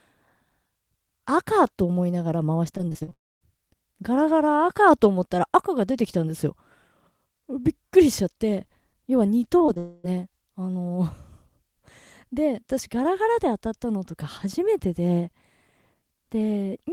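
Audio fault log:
2.77–3.13 s, repeated packet loss (robotic sound): Six holes open in quick succession, the longest 43 ms. Each is patched by stretching the last sound. About 38% of this span is synthetic fill, so the audio turns choppy and mechanical.
3.13–3.43 s, long network dropout: The fill carries on briefly, then fades. About 240 ms of silence follows before the audio returns. Nothing in that stretch is recovered. A network dropout is the likely cause.
9.59–9.62 s, 9.66–9.70 s, 9.74–9.78 s, short concealed packet loss: Three holes of about 20 ms each sit close together. Each is filled by continuing the preceding sound and then blended back in. Each one is heard as a quick smear or wobble.
9.78–10.06 s, long network dropout: About 260 ms never arrives. Here the continued sound fills the whole gap with no silence. The result is a buzz or hiss that fades. A dropout is the likely cause.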